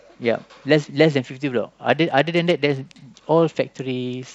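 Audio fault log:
1.89–3.04 s, Bluetooth SBC bit pool drop: the link became congested and the sender cut the SBC bit pool to keep audio flowing, which fits a fall from a bit pool of about 28 to about 11, near 90 kbps. Starved of bits, the highest sub-bands get almost nothing and the rest are quantised coarsely, so the speech turns dull and loses its treble while a gritty noise rises, until the rate recovers at 3.04 s.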